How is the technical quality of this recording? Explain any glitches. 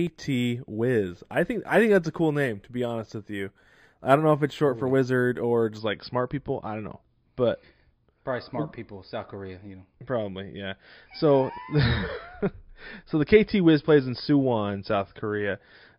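The opening stretch has one fault. From 0.0 to 5.79 s there is imaging from linear upsampling. The rate was raised, apparently from 11 kHz to 44.1 kHz, by joining samples with straight lines. That dulls the top and leaves faint mirror images between 5.5 and 11 kHz, about 35 dB down, heard as a light metallic shimmer on high-frequency detail.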